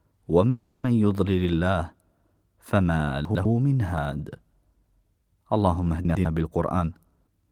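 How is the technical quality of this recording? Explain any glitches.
Three kinds of glitch mar this speech recording: a stall early on, two jumbled moments, and a rushed ending.

Call audio freeze, 0.49 to 0.85 s: packets were likely held up in transit and the jitter buffer ran dry. The receiver extended the last sound as a fading buzz or hiss for about 340 ms. The speech then resumes exactly where it paused, adding delay with nothing lost.

Chunks out of order, 3.25 to 3.45 s and 6.05 to 6.25 s: each time a 100 ms chunk arrived one chunk late and played after its successor. Nothing is missing, but the swapped order creates three abrupt joins, heard as a brief garbled scramble.

Jitter buffer speed-up, 6.58 to 7.45 s: too much audio had accumulated, so the receiver repeatedly cut tiny pitch-period slices, removing roughly 300 ms. Speech runs at 128% speed with unchanged pitch, sounding noticeably hurried.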